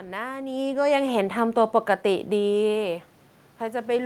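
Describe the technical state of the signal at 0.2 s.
At 0.2 s the signal is intact, with only the background noise of the room in which the speech was recorded.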